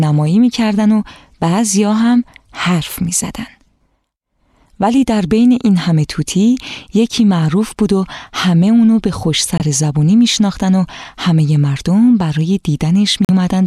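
At 9.58 s and again from 13.25 to 13.30 s the sound cuts to silence, for about 21 ms and then about 43 ms, and resumes further along as if it had kept playing, most likely a Bluetooth dropout where late packets were discarded.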